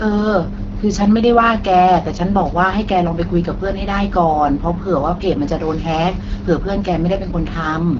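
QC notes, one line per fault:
Throughout: AMR wideband (HD Voice) codec. The speech sounds rough and raspy, with a hissy, noise-like top band and nothing above about 7.6 kHz. This points to a low-rate AMR-WB mode, around 8.85 kbit/s, where too few pulses model the voice.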